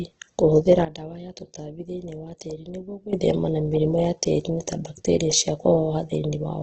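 A short speech recording carries two faults. Throughout, the sound is grainy and rough, with a noisy fizz where the tonal detail of the voice should be. Nothing reaches above 8.2 kHz, so a spectrogram shows a flat ceiling there and smeared, speckled bands below it instead of clean harmonics. This points to Opus compression, likely in its CELT music mode at a very low rate, something around 12 kbps, which refills starved bands with noise. There is also a sudden gain jump. At 0.85 s the whole signal, voice and background hiss together, drops by about 13 dB in a single step, and it springs back just as abruptly at 3.13 s. On a waveform this is a rectangular dip in the envelope with hard vertical edges, which fits a gain change applied with no ramp, likely a level setting switched on and then off.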